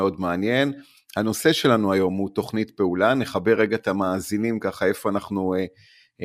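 No technical faults can be heard anywhere in the speech recording; the signal stays continuous and stable throughout.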